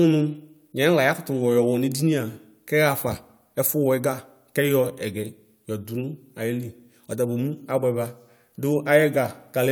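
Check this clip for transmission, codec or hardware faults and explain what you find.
No faults detected in this clip.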